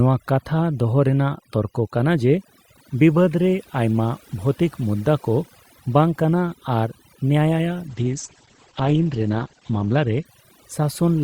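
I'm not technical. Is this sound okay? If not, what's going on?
No, it has two problems. The first runs the whole way through: overdone noise removal. A cleanup tool set too aggressively has stripped out the background noise along with quieter bits of the voice, so the background breaks up into twinkly specks.

The second is a call bitrate drop from 7.89 to 10.31 seconds. The connection briefly thought it had less room, so the audio was squeezed much harder and the crisp top end was cut off. The speech turns muffled and rough for a couple of seconds, then clears up again.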